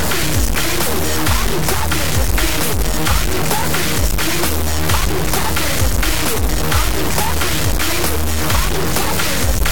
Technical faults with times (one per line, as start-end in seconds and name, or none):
0.00-9.71 low bit depth without dither
1.58 dropped buffer (overrun)
3.50 dropped buffer (overrun)
4.97 dropped buffer (overrun)
7.72 dropped buffer (overrun)